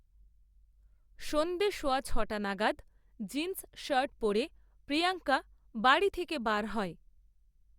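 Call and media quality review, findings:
Nothing stood out on listening to the speech in this recording.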